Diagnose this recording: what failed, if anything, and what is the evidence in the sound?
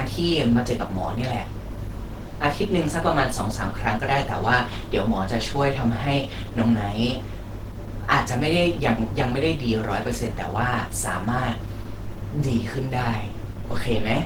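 The codec stage is where this speech clip fails, and the damage is plainly audible from start to finish. Content reaches up to about 20.1 kHz, so the bandwidth has not been narrowed, yet the voice has a muffled, hoarse, grainy roughness where fine detail is smeared into noise-like texture. That combination points to Opus compression, likely running in its hybrid speech mode at a low rate, which fits roughly 16 kbps.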